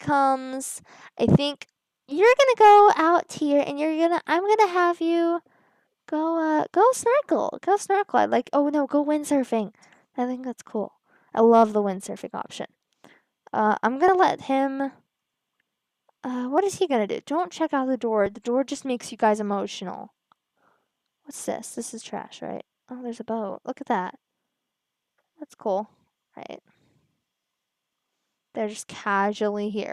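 At 14.08 s the audio jumps forward. Roughly 40 ms of sound is missing, and the two sides meet with no gap. Shorter jumps follow at 16.58 s and 18.26 s, each losing only about 10 ms. This is likely a dropped buffer (overrun): the capture program fell behind, and the hardware overwrote samples before they were read. The piece is gone, so nothing goes silent. The sound simply skips ahead.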